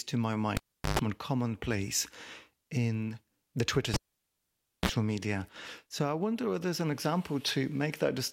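The speech is cut twice by a cable pulled and plugged in, at 0.57 to 0.99 s and 3.94 to 4.89 s. A pop, near-silence of about 0.37 s and 0.9 s, then a 50 Hz and a 60 Hz mains buzz burst before the closing pop mark a live cable pulled and replugged rather than a plain dropout.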